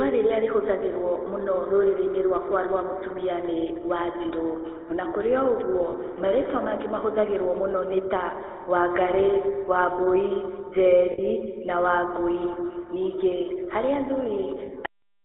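Speech passed through the GSM full-rate codec, which fits a 13 kbps line band-limited to roughly 300 Hz to 3.6 kHz, so the voice sounds buzzy and gravelly throughout. Lost GSM frames were concealed by repeating the last good frame, leaving brief rough, metallic rings at 5.90–5.94 s, 11.12–11.20 s (about 60 ms) and 14.66–14.70 s. The final buffers were never played, producing a cut-off end: the sound stops abruptly mid-sound at 14.86 s and drops straight into digital silence.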